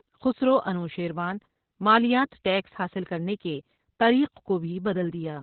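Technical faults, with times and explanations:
Throughout, Opus voice compression: heavy SILK narrowband coding, likely near 8 kbps, cuts everything above 4.3 kHz, leaving speech muffled and hoarse, unlike plain low-pass filtering's clean dullness.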